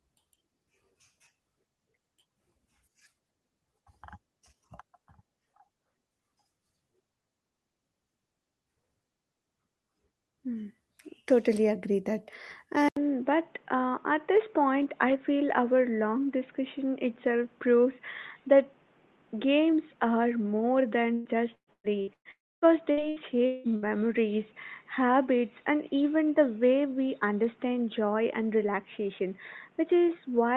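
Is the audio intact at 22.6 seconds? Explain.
No. At 22.6 s the audio is inside a long network dropout that runs from 22.31 to 22.65 s. No packets arrived for this stretch, likely from a network interruption, and about 300 ms of the original audio is simply missing. The receiver filled the gap by stretching the last sound into a fading buzz, then left about 270 ms of near-silence before the audio resumed further along, with the lost portion never played.

The same moment also sits within an input switched to a poorer device, which begins at 12.89 s and lasts to the end of the clip. The input most likely changed to a different microphone or a headset's call profile. There is a short silence of about 80 ms at the switch. After it, the sound is boxier and band-limited, with nothing above 3.8 kHz, it is a few dB quieter, and it carries a new noise floor roughly 35 dB below the signal.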